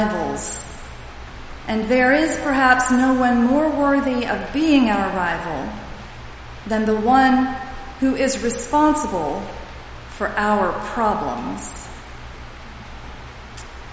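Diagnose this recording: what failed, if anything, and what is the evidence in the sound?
Nothing failed: no stage from the wiring through conversion, buffering, processing and playback leaves any audible trace of trouble anywhere in the recording.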